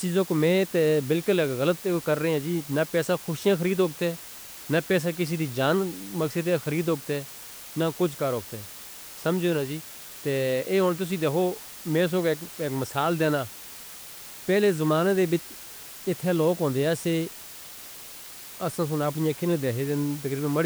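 A speech recording carries low bit depth with dither from start to finish. The level steps are coarse enough to fit a 6-bit signal, and the added dither turns the rounding error into a steady, even white hiss sitting roughly 20 dB below the speech. What separates it from undithered truncation is that the noise never changes with the voice. It stays constant through pauses and carries no gritty, signal-following distortion.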